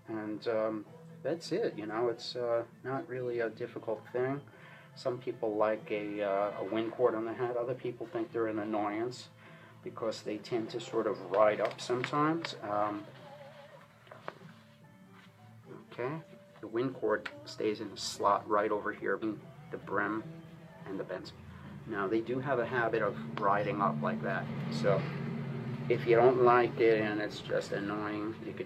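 Skips at 19.18 s, 21.13 s and 24.94 s, each jumping the sound ahead by about 0.4 s, 0.15 s and 0.4 s: compressed frames skipped, whole frames not played, consistent with 46.4 ms frames.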